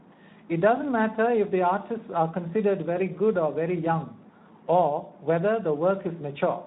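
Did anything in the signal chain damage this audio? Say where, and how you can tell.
Yes. The speech sounds hoarse and noisy throughout, which points to Speex codec damage: too few excitation bits, consistent with a bitrate around 11 kbps.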